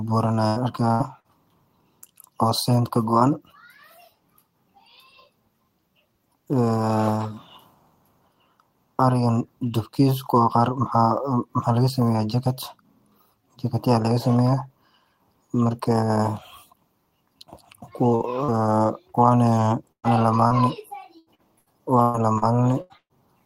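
Speech, and it's got packet loss problems at three scales. The clearest are bursts of packet loss at 0.47, 0.92 and 19.92 s, each losing about 80 ms, 80 ms and 120 ms of real audio. The receiver carries the last sound forward and fades it, so you hear a held buzz or hiss before the talk picks up further on with a chunk gone. The one at 19.92 s runs long enough that the fill dies away to near silence for roughly 90 ms. Smaller short concealed packet losses turn up at 1.20, 18.16, 18.44 and 20.47 s, each about 40 ms missing. Here the decoder bridges the hole by extending the last bit of sound, pitched if it was voiced and as shaped noise if not, then blends back in. So these come across as quick smears or wobbles rather than obvious dropouts, and a consonant can get swallowed. The worst stretch is 21.19 to 23.13 s, which has repeated packet loss with a robotic sound. Seven separate holes land close together, the longest about 120 ms, and roughly 28% of that span is patched-in sound rather than the real thing. 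Because each gap gets filled and the next one hits almost straight away, the speech turns choppy, with pieces missing throughout.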